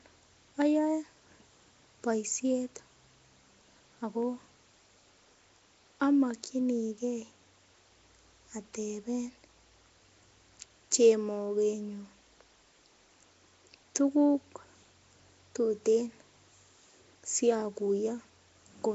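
A speech recording likely passed through Nellymoser compression, the old Flash microphone codec, at a rate fitting 32 kbps, leaving a rough hissy halo, smeared underwater tone, and nothing above 7.7 kHz throughout.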